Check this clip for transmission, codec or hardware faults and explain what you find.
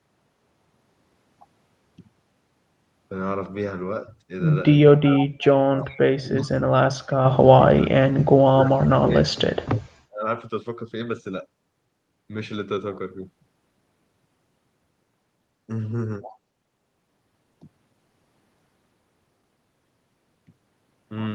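Two related faults turn up in the middle of the speech, both pointing to echo cancellation struggling during overlapping talk. The audio also shows the coding texture and top end stopping near 12 kHz that fit an Opus call path around 32 kbps.

Speech suppressed in double talk occurs at 4.88–5.39, 5.76–6.5, 7.72–8.12, 8.28–9.89 and 10.06–10.26 s. The likely cause is that the echo canceller, unable to separate the near talker from loudspeaker echo while both sides spoke, turned everything down. The voice sinks by about 30 to 40 dB, dropping out in chunks from a fifth of a second to a second and a half.

Echo leak appears briefly at 5.41 s, just after the first suppressed stretch. The likely cause is that a loudspeaker's echo canceller failed to remove all of the far-end sound its microphone picked up, so a residue was sent back. That residue is a faint scrap of voice arriving about 351 ms late, roughly 25 dB below the main speech, heard as a ghost of what was just said.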